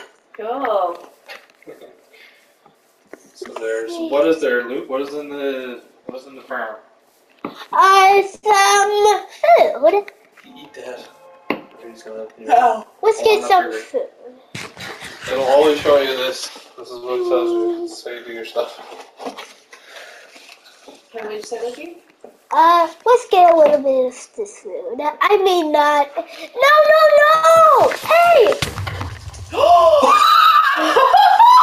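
At 8.35 s a packet arrives late and the jitter buffer runs dry. The receiver stretches the last sound for 75 ms before resuming where it stopped, causing a short stall from a late packet: a held sound with a faint buzz, nothing lost. From 12.63 to 14.38 s the jitter buffer speed-up trims the excess backlog by cutting pitch-period slices, about 70 ms in all. The sound plays 4% faster at unchanged pitch. Similar stalls follow at 16.97 s (50 ms held) and 27.35 s (82 ms held). Between them, from 23.07 to 23.72 s, a sharper 8% speed-up removes about 50 ms.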